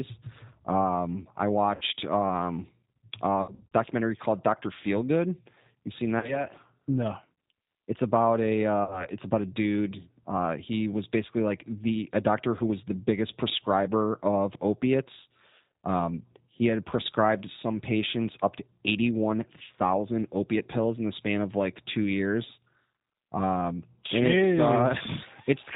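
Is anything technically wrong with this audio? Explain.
Yes, two things. The whole clip of speech runs through a G.729 codec, and there are four short spots where VoIP packet loss was concealed by the speech codec.

The G.729 coding sits over the entire 26 seconds, and its damage is plainly audible. It's an 8 kbit/s codec that doesn't send the waveform. It sends a vocal tract filter, a pitch predictor and a handful of pulses per 10 ms frame, and the decoder rebuilds speech from those. Nothing above 4 kHz gets through, so the voice is band-limited, a bit rough and faintly synthetic all the way through.

The packet-loss concealment shows up at 1.75 to 1.83 s, 3.42 to 3.71 s, 6.20 to 6.46 s, and 8.84 to 9.07 s. When audio went missing, the decoder kept going from its last pitch and filter settings and turned the gain down frame by frame. You hear each gap as a stretched, buzzy or tonal smear that fades instead of a clean dropout. 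Because each frame builds on the previous one, the speech stays a little weak or warped for a moment after real audio comes back.

The amount missing differs between the spots. About 60 ms is gone at 1.75 s and at 8.84 s, which is two packets each time. At 6.20 s only about 30 ms is missing, so it's the mildest of the four. The 3.42 s spot is the worst. About 180 ms is lost in bits scattered over roughly 300 ms, with no single run longer than 60 ms.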